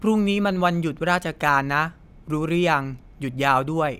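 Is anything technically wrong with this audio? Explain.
No, nothing technically wrong turns up here; this speech recording holds together without any audible faults.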